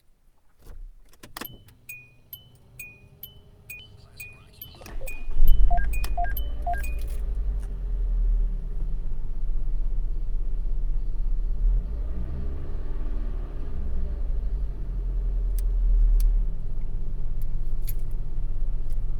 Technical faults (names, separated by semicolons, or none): skip ahead; jitter buffer speed-up